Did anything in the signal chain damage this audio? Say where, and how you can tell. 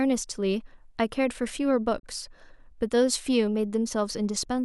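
Yes. At the reception and decoding stage there is a digital broadcast dropout from 1.98 to 2.05 s. The speech fades out over about 20 ms into a silent hole, then resumes. The roughly 32 ms lost fits a single failed frame that the receiver muted rather than concealed, which sets it apart from packet-loss smearing or a hard edit click.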